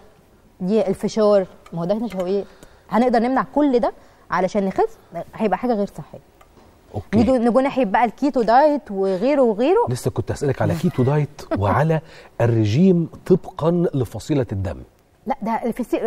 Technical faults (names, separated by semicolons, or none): none